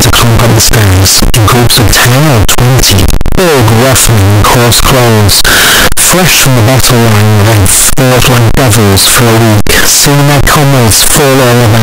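From start to finish the speech is buried in loud, harsh distortion, with quiet gaps as loud as speech, likely from signed and unsigned mixed up on what sound like 16-bit samples. The waveform slams between its extremes at every zero crossing; the spectrogram shows dense broadband energy everywhere.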